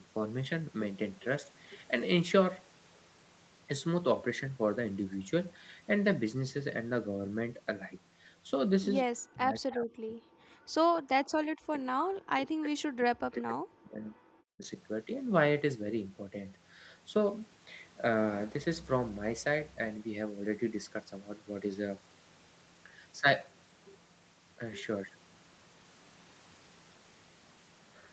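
From 9.04 to 10.4 s and again from 11.15 to 14.64 s, the talker's voice sinks by as much as about 40 dB, most likely speech suppressed in double talk, where the canceller cannot separate the talker from the far-end echo and turns both down. Unlike gating, it is the speech itself that is turned down, for well over a second at a time. Between those stretches, from 10.68 to 10.87 s, the background is gated by the echo canceller: the room sound drops by about 40 dB for roughly a tenth of a second while the loudspeaker plays, then returns as the canceller releases.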